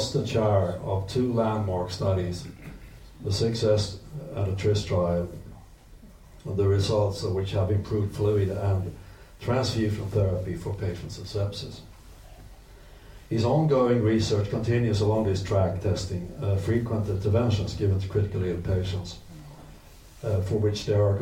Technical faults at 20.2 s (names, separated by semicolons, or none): none